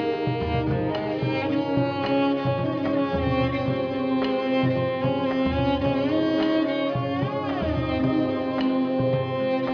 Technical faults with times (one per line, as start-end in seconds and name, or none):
none